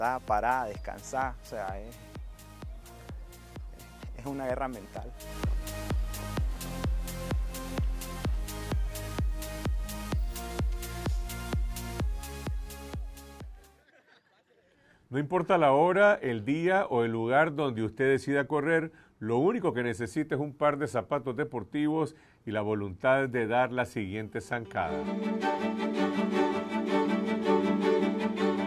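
No technical faults can be heard anywhere in the recording.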